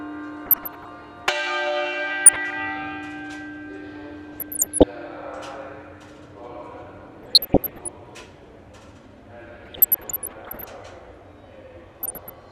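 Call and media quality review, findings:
DAB burbling, six bursts: 0.46–1.04 s, 2.26–2.53 s, 4.33–4.83 s, 7.23–7.88 s, 9.64–10.64 s, 11.96–12.30 s. Short noise blips and sub-band level jumps, worst around 4.3–4.8 s. Probable component: DAB receiver, weak reception. Bit errors slip past error correction into MP2 frames, corrupting samples into noise blips in single sub-bands and scale factors so individual sub-bands jump in level for up to a frame. Spectrogram: short rectangular blocks flaring in isolated frequency bands. Waveform: brief irregular envelope bumps.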